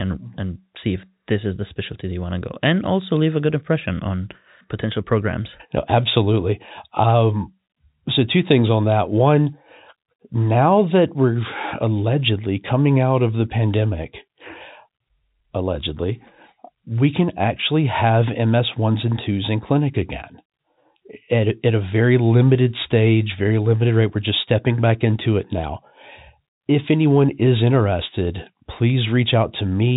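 No technical faults can be heard anywhere in this speech clip. It carries the narrow band of G.711 telephone coding, with nothing above about 3.8 kHz.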